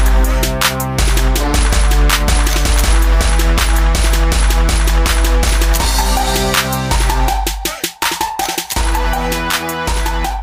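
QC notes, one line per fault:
No audible faults found.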